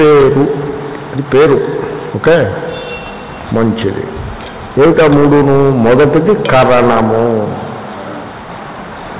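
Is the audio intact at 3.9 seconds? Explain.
Yes, the audio is intact at 3.9 seconds: nothing drops out, clicks or distorts there, and what you hear is the usual coding noise and narrowed band of the WebRTC call path, which leaves nothing above 4 kHz in a way that fits a G.711 mu-law codec at 64 kbps.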